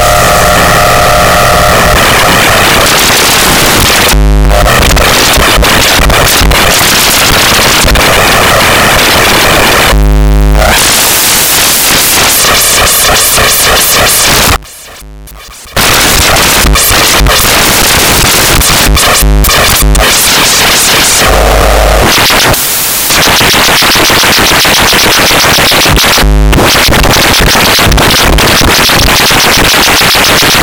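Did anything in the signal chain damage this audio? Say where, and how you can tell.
Yes. Between 14.56 and 15.77 s the everyday sound drops by about 22 dB, with the shared content largely gone and only a faint residue left. That is the signature of one channel inverted, likely a polarity reversal in the analogue wiring. When the two nearly identical channels are summed to mono, the shared material cancels and only their small difference survives.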